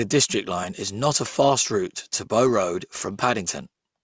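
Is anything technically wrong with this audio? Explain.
Yes, there's aliasing running through the whole clip. The speech sounds like it was taken down to a lower sample rate, which fits a drop from 48 kHz to 16 kHz, with no anti-aliasing filter first. Everything above 8 kHz folds back below that edge as unrelated frequencies, fairly strong at roughly 15 dB under the speech. You hear it as gritty, metallic sibilants, and the spectrum packs right up against 8 kHz.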